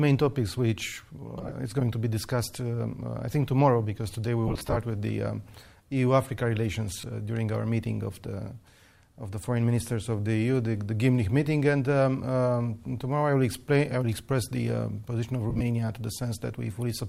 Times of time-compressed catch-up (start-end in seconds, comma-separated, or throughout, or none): none